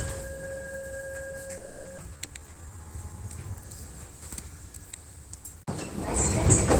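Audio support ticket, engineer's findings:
Call audio freeze, 1.57–1.88 s. Last sound stretched into a fading buzz or hiss for about 280 ms, then audio resumes exactly where it stopped, nothing lost. Probable component: jitter buffer running empty, likely from packets held up in transit. Unlike a dropout, content is intact; only time is inserted.

Skip ahead, 1.97–2.01 s. Playback jumps forward with a near-seamless join and only a brief fill. Roughly a fifth of a second of sound is gone, and latency drops by around 150 ms. Probable component: audio lost in transit or discarded by an overflowing jitter buffer. Unlike the freeze, material is missing rather than delayed.

Jitter buffer slow-down, 2.03–2.93 s. Sound runs at 81% speed with pitch unchanged. Sounds are drawn out, with a slight warble possible, and 178 ms is added in total. Probable component: jitter buffer repeating single pitch periods to rebuild its reserve. 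Unlike the freeze, there is no buzz or stall, just steady stretching.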